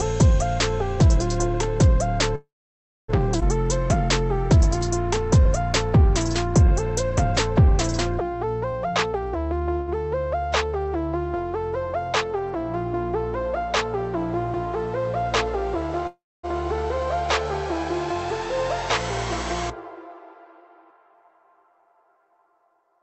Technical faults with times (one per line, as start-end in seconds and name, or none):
2.35-3.10 call audio freeze
3.40-3.43 skip ahead
4.04-8.73 jitter buffer slow-down
8.86-9.78 jitter buffer speed-up
9.80-9.90 short stall from a late packet
16.07-16.45 call audio freeze
20.55-23.02 jitter buffer speed-up